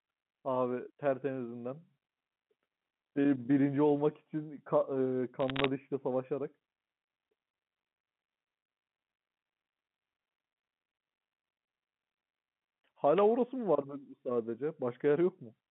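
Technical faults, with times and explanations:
5.40 to 5.66 s, bit errors on a digital phone line: a quarter-second patch of crackle lies over the speech as flipped bits corrupt single samples, at a rough error rate of 0.4 percent. Hits landing on the sign or upper bits of the logarithmic code give sharp ticks.
13.15 to 13.22 s, wireless microphone noise hit: a brief burst of static swishes over the speech for about 60 ms. The radio signal from the FM microphone has faded as reflections cancelled, so receiver noise rose.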